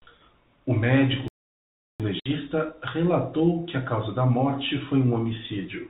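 From 1.28 to 2.00 s the speech halts for about 0.72 s and then resumes where it stopped, a playback stall, likely from the player running dry. A lost-packet gap would be shorter and skip material. At 2.20 s, just before "relatou que a causa", comes packet loss on an ADPCM call: a hard-edged 60 ms hole where a few packets vanished, followed by slightly distorted speech as the decoder's predictor resynchronises. That recovery is what sets it apart from a plain dropout.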